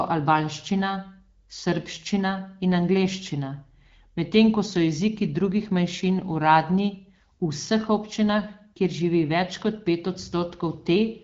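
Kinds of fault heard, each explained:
No faults can be heard in the speech. It comes through an AMR wideband (HD Voice) codec path at 12.65 kbit/s, with light coding damage and nothing above about 7.4 kHz.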